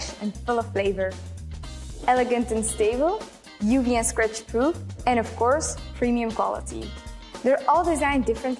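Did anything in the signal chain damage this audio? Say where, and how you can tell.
No, none of the stages between capture and playback has left an audible mark on this audio. There is nothing to locate or trace back to a mechanism.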